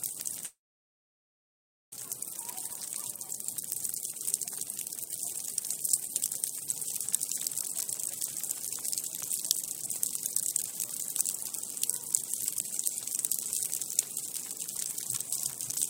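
At 0.45 s the sound breaks off. A brief fading buzz carries the last sound forward, then silence holds until 1.98 s. The likely cause is a long network dropout. No audio arrived for about 1.5 s, and the receiver could only stretch and fade what it had. When sound returns, about 1 s of it is gone for good. The delay grew by roughly half a second.

From 3.61 to 6.61 s, a jitter buffer speed-up follows. The receiver was holding too much audio. It trimmed many tiny pitch-period pieces to catch up. Playback runs at 110 percent, with pitch unchanged. Roughly 0.3 s is removed, so the sound feels hurried. A milder pass runs from 7.07 to 9.75 s at 105 percent, cutting roughly 0.15 s more.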